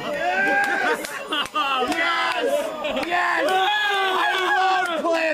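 From 0.0 to 3.4 s, USB whine: a steady 1 kHz tone about 30 dB below the signal, from 1 ms bus frames leaking into the power or ground, far higher-pitched than mains hum.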